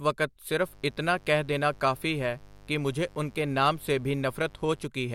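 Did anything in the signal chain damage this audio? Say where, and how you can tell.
Yes. Mains buzz enters in the analogue wiring. A steady, raspy buzz runs from 0.61 to 4.87 s, roughly 25 dB below the speech. It is built on 50 Hz. Sharp switching spikes, twice per cycle, spray harmonics up into the kilohertz range.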